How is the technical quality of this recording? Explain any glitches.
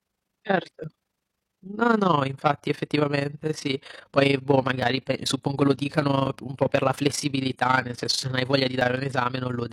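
The technical quality is compromised by a single fault that runs through the entire recording. Overlap-add ripple is present from start to finish: the speech was split into windowed frames and rejoined with an overlap that fails to keep the gain constant. Level swings by about 11 dB around 30 times a second, producing a rough flutter over every syllable.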